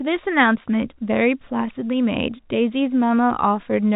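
No technical faults can be heard anywhere in the speech. It comes over a G.711 telephone coding path, so nothing above about 3.8 kHz is present and any coding damage is faint at most.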